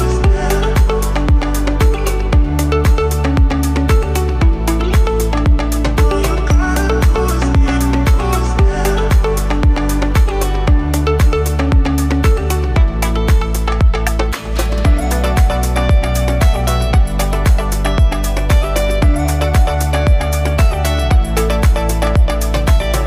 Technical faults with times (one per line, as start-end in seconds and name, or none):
none